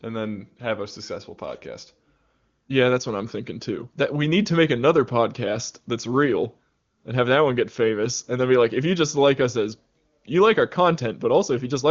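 Nothing here needs flagging: the speech has the gently capped top end of wideband phone audio, with nothing above about 7.4 kHz, which fits AMR wideband (HD Voice) running at its top rate of around 23.85 kbit/s, and no faults turn up anywhere in it.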